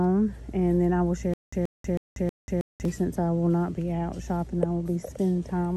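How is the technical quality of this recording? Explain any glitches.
The recording has one glitch, a stutter with silent gaps from 1.34 to 2.85 s. A 130 ms burst repeats four times, separated by 189 ms of digital silence, likely from a stalled stream replaying its last fragment. On the waveform, identical blocks alternate with flat lines every 319 ms.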